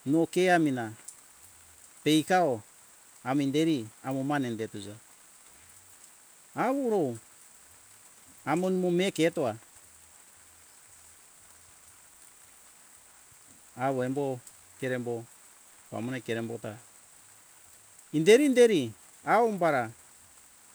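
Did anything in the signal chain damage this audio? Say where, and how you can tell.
No, nothing in the chain audibly damaged this speech.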